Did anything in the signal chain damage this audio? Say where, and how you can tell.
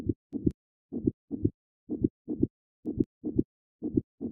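Yes. Word clock ticks at the digital interface: sharp clicks about every 0.2 s from 0.15 to 4.30 s, where an unlocked receiver clock slips one sample each time.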